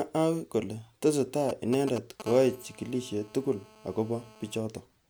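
From 1.49 to 2.22 s there are GSM signalling bursts. A 2G phone somewhere close is sending brief clumps of radio pulses while it handles signalling, and the audio circuit rectifies them into a galloping dit-dit-dit of short 217 Hz buzzes. They sit fairly loud, only around 10 dB under the speech.

Right after, from 2.26 to 4.58 s, it turns into steady GSM phone buzz. The phone is now in a call, transmitting 217 bursts a second, and that rectified pulse train becomes a continuous raspy 217 Hz drone full of harmonics, about 22 dB below the speech and unrelated to it.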